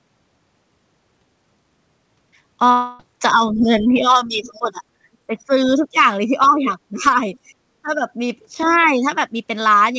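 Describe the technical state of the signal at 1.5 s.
At 1.5 s the speech is intact, with no dropout, glitch or distortion, and the call-path coding, which leaves nothing above 8 kHz, is present as it is throughout.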